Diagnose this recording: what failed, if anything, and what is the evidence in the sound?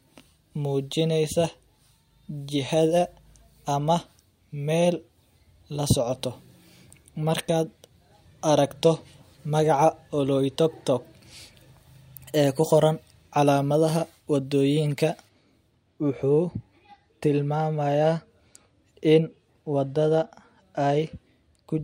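Pre-emphasis left on at the receiver stage, 0.0 to 15.29 s: thin, sibilant speech with about 13 dB extra at 10 kHz, following a steady 75 µs FM curve rather than a microphone's peak.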